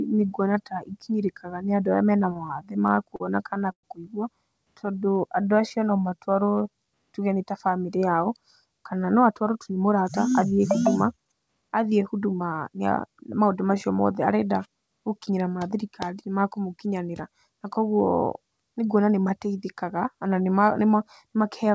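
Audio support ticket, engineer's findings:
Repeated stalls (stutter), 2.34–3.85 s: 11 short holds, longest 112 ms, about 243 ms filled in total. Jitter buffer ran dry; receiver stretched the last sound until late packets arrived.

Jitter buffer slow-down, 4.92–7.46 s: speech at 90% speed, same pitch, 262 ms added. Receiver repeated pitch periods to rebuild its reserve.

Jitter buffer speed-up, 9.22–12.71 s: speech hurried to 109% speed, pitch unchanged, roughly 0.3 s cut. Receiver dropped pitch-period slices to shed excess buffered delay.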